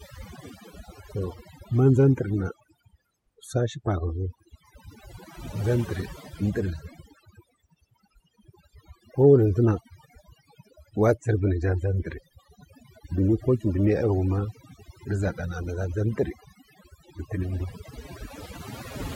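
A speech recording with overdone noise removal running from start to finish. The gaps between phrases fall to near silence speckled with twinkling artefacts. A noise reduction stage set far too aggressively is the cause: it pulls individual frequency bands down hard whenever they sit close to its noise estimate, so the quieter components of the voice get stripped away along with the background noise.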